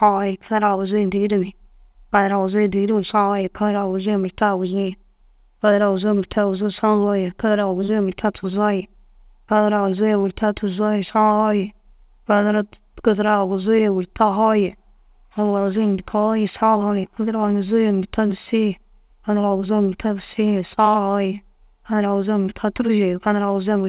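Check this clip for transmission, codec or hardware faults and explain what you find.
No transmission, codec or hardware faults can be heard in the clip. The speech has been through a call path that works normally, and nothing is heard above 4 kHz, a narrowband limit that fits a G.711 mu-law link at 64 kbps.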